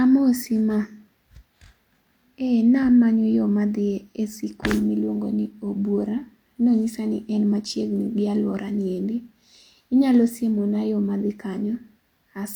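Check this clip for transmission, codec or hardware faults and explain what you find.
Nothing in this speech recording points to a transmission, codec or hardware problem, so there's nothing here to flag.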